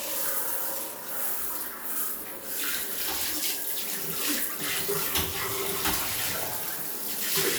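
Nothing stood out on listening to this sound recording.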